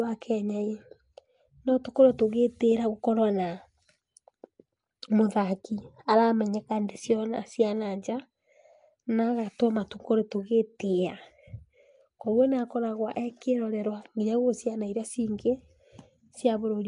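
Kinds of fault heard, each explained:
Nellymoser compression: A gritty noise halo and watery smearing cling to the speech, likely from Flash's Nellymoser Asao codec. Nothing sounds above 10.7 kHz.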